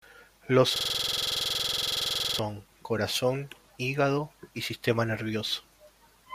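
From 0.76 s to 2.39 s the speech gives way to a system hang loop. The playback side stalled while the audio hardware kept replaying the same ring buffer, so one 46.4 ms slice of sound repeats exactly, about 35 times. That length fits a 2048-sample buffer. Repeating at 21.5 Hz, the loop sits between a buzz and a stutter: a rough, rapid mechanical rattle with a fixed timbre.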